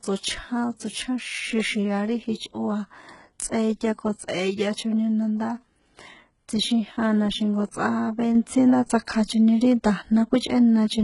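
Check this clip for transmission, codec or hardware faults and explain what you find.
Yes, there is one codec fault, present for the whole speech clip. Throughout, heavy HE-AAC compression is likely. Treble rebuilt from copied lower bands makes s sounds gritty and metallic. A spectrogram shows repeated, blocky high bands ending sharply at 11.1 kHz.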